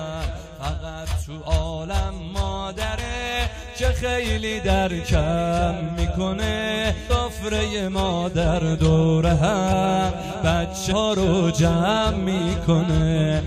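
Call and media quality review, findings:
Sample clock jitter, throughout: fine hiss/roughness riding on the signal, strongest on loud and bright passages, gone in silences. Probable component: converter clock. Timing error of a few microseconds RMS scales with waveform slope, giving error around 35 dB below signal. Unlike a steady noise floor or dither, it tracks level and high-frequency content and never sits under quiet gaps.

Compressed frames skipped at 2.97, 7.09, 9.72 and 10.91 s: brief disturbance at the join, then audio resumes further ahead. Roughly 0.3 s lost at 2.97 s, about 0.15 s at 7.09 and 10.91 s, under 0.1 s at 9.72 s. Probable component: decoder or stream transport. Missing or rejected frames are dropped whole, so jumps are multiples of 21.3 ms, which fits 1024-sample frames. Distinct from dropouts: no silent gap, because the audio jumps ahead rather than pausing.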